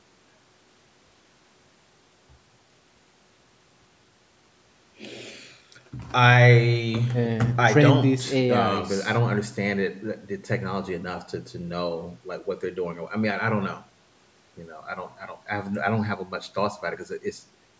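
No technical faults occur in this speech at any point, so there is nothing to place in time order; the call microphone processing only trims the lowest bass and leaves nothing above 8 kHz, as expected.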